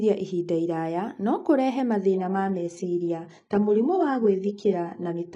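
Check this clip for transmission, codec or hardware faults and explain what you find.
One fault is present. From 2.12 s to the end, an adaptive stream at a lower bitrate plays. A slowed connection forced a leaner encode. The speech turns dull and synthetic, with nothing above 11 kHz. The switch is sudden, with no gap.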